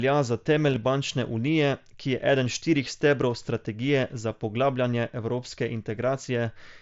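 A nearly hidden glitch at 0.70 to 0.76 s, just before "bančne unije ki je", comes from concealed Bluetooth headset packet loss: short dropouts, the longest 7.5 ms, were filled with repeated recent waveform.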